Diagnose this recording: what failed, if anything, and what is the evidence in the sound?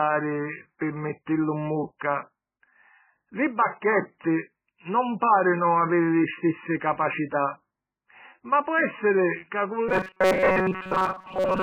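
Heavy watery, swirling damage runs through the speech. This is most likely MP3 compression at the codec stage at a very low bitrate, around 9 kbps. Short of bits, the encoder zeroes weak frequency lines, which switch on and off from frame to frame. That produces the swirl and leaves consonants smeared.

Pre-echo appears at 0.79 to 0.81 s, also at the codec stage. A hiss, about 20 ms long, precedes a sharp onset, and the attack itself sounds softened. The transform spreads its quantisation noise evenly across the block, so noise scaled for the loud attack also fills the quiet gap just before it. Nothing in that gap masks the noise.

From 9.89 s to the end, the speech becomes a rigid, metallic robotic sound from repeated short buffers, with a fixed buzz at 188 Hz imposed on it. This is likely a driver or buffer underrun. New audio arrived too seldom, so a fragment of about 5.3 ms was replayed to fill the gaps, and most of the real audio in that stretch was skipped. 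The repeat period, one over 188 Hz, sets the constant buzz pitch.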